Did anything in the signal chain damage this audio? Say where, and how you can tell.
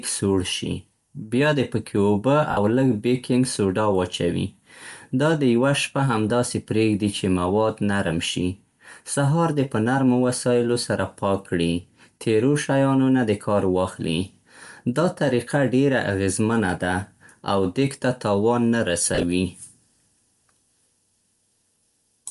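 Yes. The codec stage shows damage throughout: the speech has a breathy, grainy edge with noise-like upper frequencies, likely Bluetooth LC3 compression at a bitrate around 48 kbps, where the encoder zeroes much of the upper spectrum and the decoder fills it with noise.

There are also lost LE Audio frames in the wireless link. At 2.51–2.57 s, after "بیا دې پکې اوبه", a 60 ms gap is filled by a noisy smear of repeated spectrum. A brief 10 ms blip occurs at 6.29 s before "پرېږدي چې مواد نرم". From 19.15 to 19.23 s, after "دېګ ته تاوان نه", scattered losses span 80 ms, the longest run roughly 30 ms.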